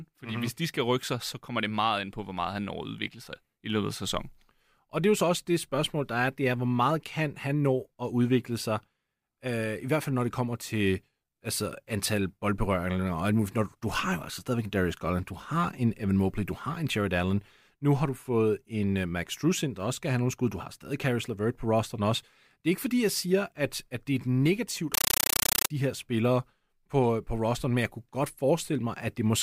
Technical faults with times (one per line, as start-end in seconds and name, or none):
24.94-25.70 compressed stream played as audio